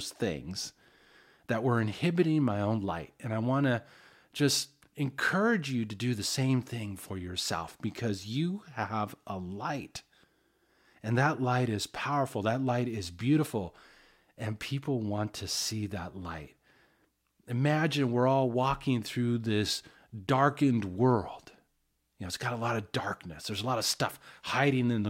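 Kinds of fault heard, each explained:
Nothing stood out on listening to this speech recording.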